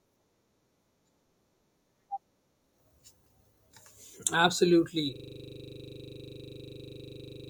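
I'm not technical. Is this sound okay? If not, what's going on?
No. At about 5.16 seconds the computer or its sound driver froze, a system hang loop, and the sound hardware kept replaying the same 40 ms piece of audio until the end. The speech stops and turns into a harsh, steady buzz repeating 25 times a second.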